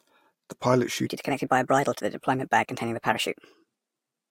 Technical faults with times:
1.07-4.30 section at the wrong speed

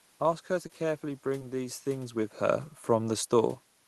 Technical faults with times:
0.67-0.71 short concealed packet loss
1.39-1.43 short concealed packet loss

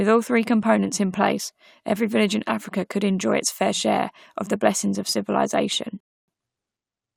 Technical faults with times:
6.00-6.28 rebuffering stall

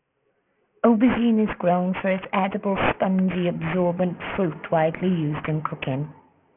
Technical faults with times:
0.00-6.57 aliasing

